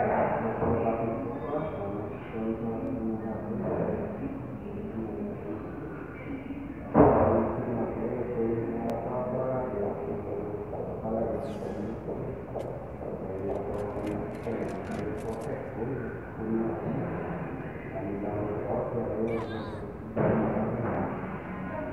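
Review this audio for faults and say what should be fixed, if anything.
Overlapping chunks cause a brief stutter at 2.87–2.90, 8.90–8.92, 14.92–14.95 and 20.95–20.97 s. Each 6-second block restarts about 25 ms early, so that slice plays twice. Unlike a dropout, nothing goes missing; sound repeats at a steady 6-second spacing. Trim or crossfade each block by the overlap so consecutive chunks join end to start without re-reading samples.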